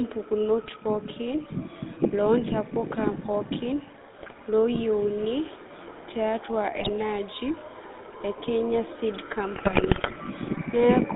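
The whole clip runs through the GSM full-rate codec: band-limited to roughly 200 Hz–3.7 kHz, with a plainly audible buzzy, gravelly texture from the pulse-driven vocal-tract model, which fits a 13 kbps stream. GSM bit errors hit at 4.18–4.42 s, just after "ntapuka pookin", then at 6.76–6.89 s and 9.56–10.17 s. Corrupted filter, pitch and gain values make it squawk, pop and gargle.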